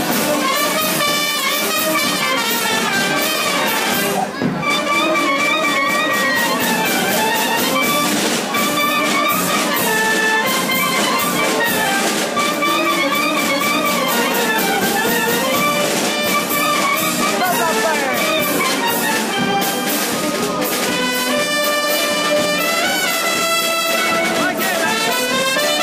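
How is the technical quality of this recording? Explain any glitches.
One clear glitch: a loudspeaker feedback squeal from 5.14 s to 6.53 s. A microphone is picking up the loudspeaker it drives, and at about 1.9 kHz the loop gain rises above one, so that single frequency feeds on itself. It swells over roughly a second into a piercing tone about as loud as the recorded sound. That gradual build-up is what separates it from a steady interference whine or test tone, which would start at full strength and hold constant.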